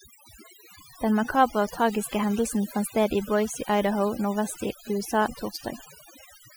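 Throughout the clip, the speech carries overdone noise removal: the noise reduction stage was set far too aggressively for the level of background noise it faced. Any frequency band that strayed close to its noise estimate was pulled down hard or shut off entirely, taking the softer parts of the voice along with the noise. The result is a background that drops and breaks up into twinkling, chirpy specks.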